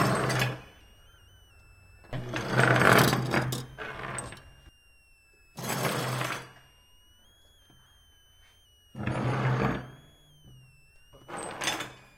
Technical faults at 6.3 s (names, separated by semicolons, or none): switching supply whistle